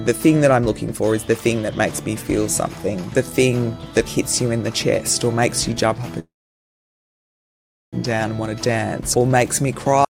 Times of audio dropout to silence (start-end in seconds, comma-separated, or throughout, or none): 10.05-10.11